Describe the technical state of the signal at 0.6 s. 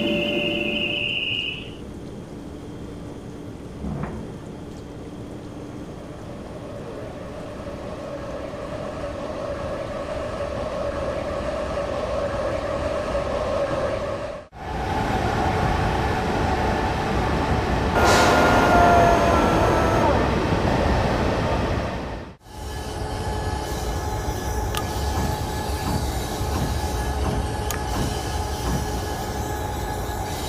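At 0.6 s the signal is intact, with no dropout, clipping, distortion or other fault audible at that moment.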